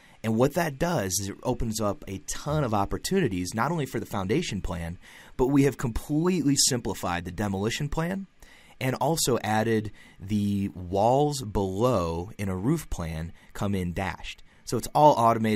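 No faults are audible anywhere in the clip.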